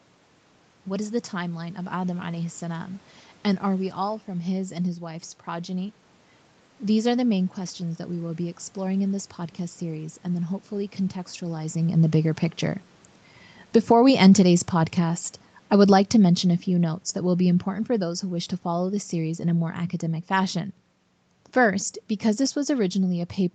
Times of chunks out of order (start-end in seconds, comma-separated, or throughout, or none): none